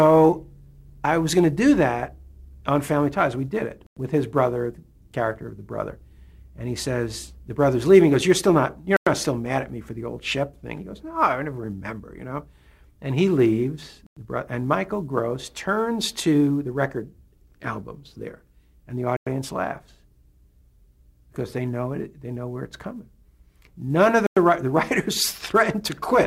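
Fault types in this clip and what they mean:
Gap between chunks: the audio is delivered in 5-second blocks with 100 ms of silence at each join. No sound is lost, but it stops abruptly five times, at 3.87, 8.97, 14.07, 19.17 and 24.27 s. On a waveform each gap shows as a flat, silent strip with sheer edges. On a spectrogram it is a narrow blank column spanning every frequency, repeating evenly every 5.1 s.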